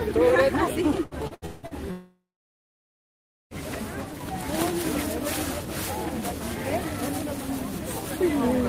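From 1.03 to 1.74 s the sound turns choppy, breaking up into a stuttering, robotic texture with pieces missing. This is repeated packet loss (robotic sound): five separate holes open in quick succession, the longest about 170 ms. Each one is patched by stretching the last received sound forward, so over half of this 0.7 s stretch, roughly 0.39 s, is synthetic fill rather than real audio.

Shortly after, from 1.91 to 3.54 s, the audio briefly smears into a fading buzz and then falls away to silence for about 1.3 s before returning. The cause is likely a long network dropout: around 1.6 s of audio never arrived. The receiver extended the last sound for a short moment, then had nothing left to play, and playback resumed further on with that whole section missing.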